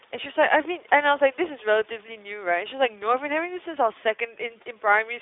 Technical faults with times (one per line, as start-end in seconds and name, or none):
0.00-5.21 iLBC codec